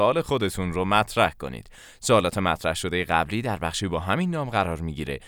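No technical faults can be heard anywhere in the speech recording; the signal holds steady throughout, with no breaks, level disturbances or added noise.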